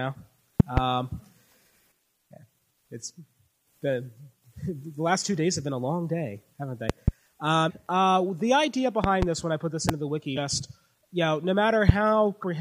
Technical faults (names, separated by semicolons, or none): loud pop; damaged data in a compressed stream